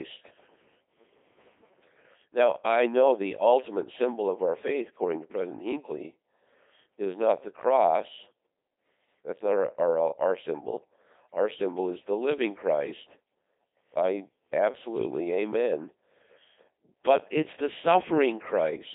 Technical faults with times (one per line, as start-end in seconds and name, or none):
0.00-18.95 Codec 2 vocoder